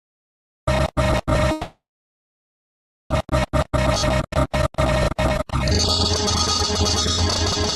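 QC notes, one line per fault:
1.51–3.13 s, call audio freeze: the sound stalls and the gap is filled for about 1.6 s. The last sound carries on briefly as a decaying buzz and then drops to near silence for roughly 1.3 s. When playback resumes it picks up exactly where it stopped, so nothing is lost, but everything after runs about 1.6 s later. This is likely packets held up in transit, leaving the jitter buffer empty until they arrived.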